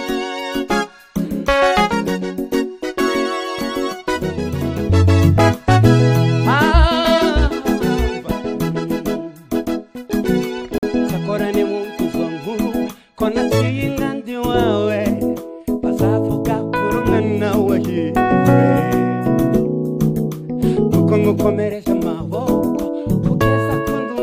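A gap between stream segments at 10.78 to 10.83 s: mistimed segment boundaries leave about 48 ms of hard-edged silence, with no audio lost.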